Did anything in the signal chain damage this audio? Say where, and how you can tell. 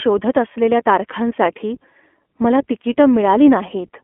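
Yes. Throughout, the speech sounds thin, rough and faintly synthetic, confined to 250 Hz–3.4 kHz. This is iLBC codec damage at the codec stage, with each 20 ms frame coded independently, consistent with 15.2 kbps.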